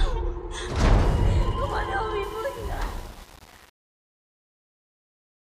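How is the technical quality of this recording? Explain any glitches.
There's one real glitch, and it sits in the fade-out. From 2.23 s to 5.56 s there's truncation distortion on the fade: the volume stage drops bits without dither, which fits roughly a 7-bit word, so the tail turns gritty. The fade itself starts around 2 s and runs to the end at 5.57 s.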